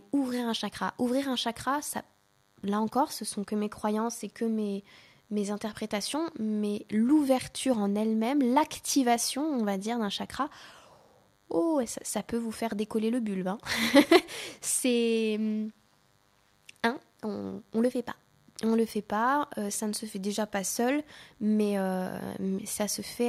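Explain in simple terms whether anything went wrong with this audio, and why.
DECT cordless phone buzz runs from start to finish under the speech. A DECT cordless phone or its base station nearby sends a short radio burst every 10 ms. The recording circuit picks up that radio energy and turns it into sound, so each burst becomes a click repeating 100 times a second. The result is a thin, steady buzz at 100 Hz. It sits quietly, well below the speech.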